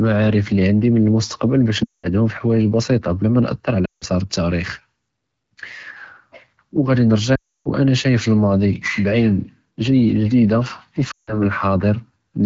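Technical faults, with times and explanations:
1.83–2.10 s, 3.85–4.04 s, 7.35–7.69 s (ending just before "שַאיֶף לִמַאדִי") and 11.11–11.42 s, lost AMR speech frames: the speech drops to near silence within two frames, then returns briefly weak or rough. Corrupted frames were discarded, and the AMR-WB decoder repeated its last good pitch and vocal-tract settings at falling gain.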